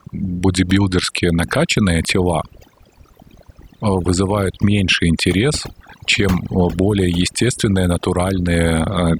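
From start to finish the speech carries overdone noise removal: a denoiser pushed too hard has cut individual frequency bands whenever they came close to its noise estimate, taking the softer parts of the voice along with the noise. The gaps between phrases fall to near silence flecked with twinkling specks. Unlike a noise gate, which mutes everything at once, the removal here is band by band, so the residue chirps instead of simply switching off.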